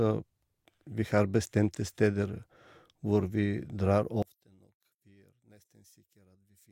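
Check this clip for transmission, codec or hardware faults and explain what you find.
One fault is present, in the last part of this speech clip. From 4.22 s, just after "vi drar", to the end at 6.71 s, the level drops by about 30 dB, leaving a faint residue. This is likely one channel inverted: the centred voice cancels in the mono sum. A plain dropout or gain fault would leave silence or a full-bodied but quieter voice, not this faint difference signal.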